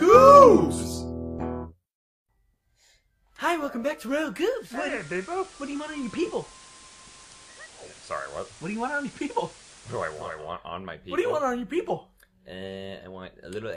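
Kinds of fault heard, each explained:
Digital radio blending to analogue: from 4.46 to 10.53 s the radio slides over to its FM signal, adding hiss about 25 dB below the signal.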